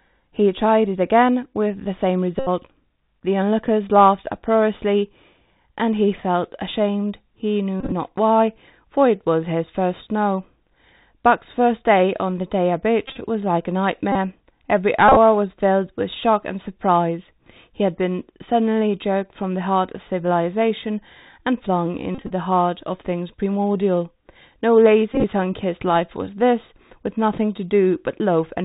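Throughout the speech, the Bluetooth CVSD headset codec at 64 kbps leaves plainly audible damage. The spectrogram stops flat at 4 kHz. A granular hiss fills the floor, s sounds turn scratchy, and loud bright moments distort where the one-bit delta steps can't keep up.

The Bluetooth headset packet repeated fault appears at 1.44–1.46, 2.39–2.48, 7.80–7.93, 13.08–13.18, 14.12–14.16, 15.08–15.17, 22.15–22.31 and 25.13–25.24 s. Lost packets are replaced by the previous one's bits. The 1.44 s event is brief scattered ticks. The others buzz near 267 Hz, seen as identical 3.75 ms waveform cycles and evenly spaced harmonic stripes.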